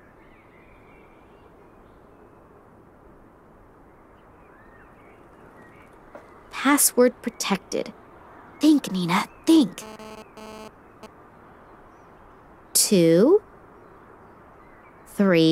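A nearby 2G phone transmitting data in bursts was rectified by the audio circuit, adding GSM phone buzz from 9.50 to 11.06 s: a hard, raspy 217 Hz buzz about 21 dB below the signal.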